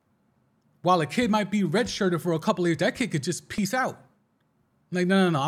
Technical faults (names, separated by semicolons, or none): block of digital silence